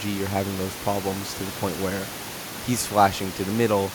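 No technical faults are present in this speech recording; the steady room noise sitting about 15 dB below the speech belongs to the recording space, not the system.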